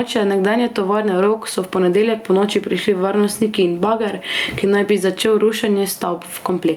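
Gain pumping runs through the whole clip, from start to end. The level heaves with the speech, swinging by around 10 dB. The likely cause is an input gain set far too high, with a fast limiter or compressor pulling it down on every loud syllable. Loud and quiet passages sit unnaturally close together and the speech sounds squashed. The room noise sits about 43 dB below the speech.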